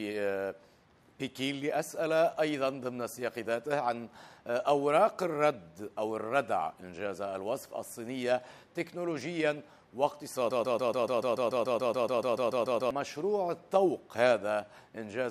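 From 10.51 s to 12.91 s the audio sticks: a fragment only about 0.14 s long repeats exactly, back to back, 17 times, giving a rapid mechanical stutter for about 2.4 seconds before playback moves on. This is a broken-record loop. The player, encoder or stream likely stalled and kept re-sending the last short piece it held, so the audio that belonged in that stretch never plays and is lost.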